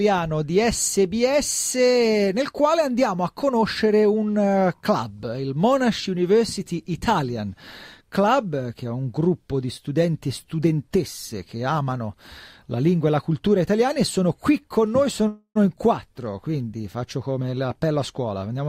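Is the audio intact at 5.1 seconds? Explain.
Yes, the audio is intact at 5.1 seconds, with no dropout, click, distortion or other fault audible at that point.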